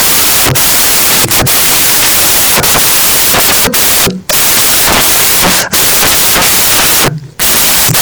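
Samples built from the wrong bytes affect the speech from start to finish. The decoder assembles every sample from its bytes incorrectly, whether by a one-byte offset, a reversed byte order or a mistaken alignment, so the rapidly fluctuating low-order bits end up as the most significant part of each value. The result is a loud, harsh wash of broadband noise covering the whole clip.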